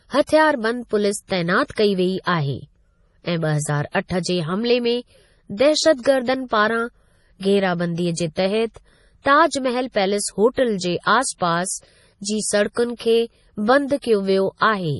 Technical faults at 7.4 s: MP3 compression

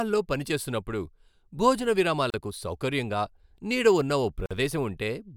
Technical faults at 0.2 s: none

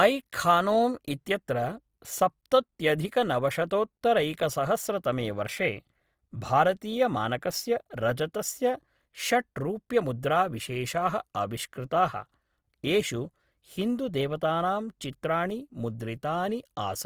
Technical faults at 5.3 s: Opus compression

